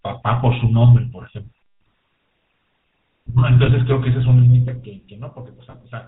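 Throughout, the speech carries the buzzy, gravelly roughness of the GSM full-rate codec, consistent with its 13 kbps mode. Pulse-driven excitation from a simple vocal-tract model leaves a spectrogram empty above 4 kHz, with harmonics smeared into coarse, grainy bands.

From 3.66 to 3.69 s, and again from 5.70 to 5.76 s, lost GSM frames appear. The decoder repeated the last good frame's settings, so the sound briefly holds as a metallic ring. On a spectrogram this shows as a frozen stripe about 20 ms and then 40 ms long, matching one and then two missing frames.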